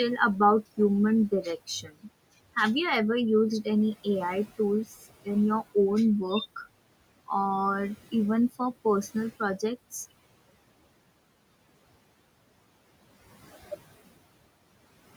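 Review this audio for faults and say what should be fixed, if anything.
Between 1.67 and 2.08 s the speech goes faint and swallowed, dropping by about 19 dB at its deepest over roughly a fifth of a second. This is speech cut by the noise suppressor, which mistook soft speech for noise and turned it down. Reducing the suppressor's attenuation depth or making its speech detection more sensitive to quiet passages would prevent it.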